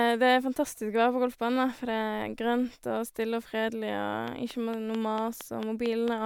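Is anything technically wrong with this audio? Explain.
Yes. From 4.28 to 6.09 s there is a train of clicks: roughly ten sharp, similar pulses at a regular rate of about 4.4 per second, each standing out at around 10 dB above the speech. The likely cause is interference from nearby equipment or a faulty connection or power supply repeatedly injecting the same pulse. It sounds like steady ticking laid over the speech, including the pauses. The even spacing and matching shape separate it from random crackle or a single isolated click.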